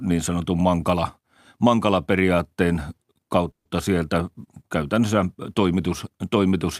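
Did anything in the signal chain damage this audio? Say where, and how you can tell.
Yes, at the network stage. A call audio freeze runs from 3.51 to 3.67 s. The last sound smears into a fading buzz, then mostly silence, about 130 ms. Speech resumes where it stopped, nothing missing, just later. Delayed packets likely emptied the jitter buffer.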